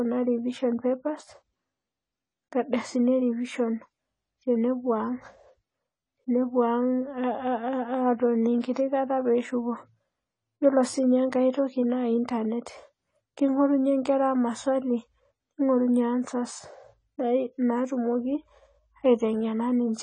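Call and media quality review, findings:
Dull, smeared speech throughout, with plainly audible codec damage. Nothing above 10 kHz; top band cut off. Swirly, fizzy texture on sustained sounds and sibilants. Likely cause: AAC compression, AAC-LC at a low bitrate, consistent with about 24 kbps. The quantiser starves bands and lowers the cut-off, leaving spectral holes.

Pre-echo at 8.60 to 8.64 s. Short hiss of about 34 ms before a sharp attack. The attack sounds softened. Transform codec block: quantisation noise sized for the loud onset spreads back into the quiet gap ahead of it.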